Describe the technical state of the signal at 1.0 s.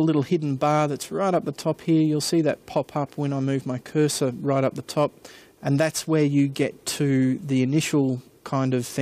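Nothing is wrong with the signal at 1.0 s; the audio is intact there.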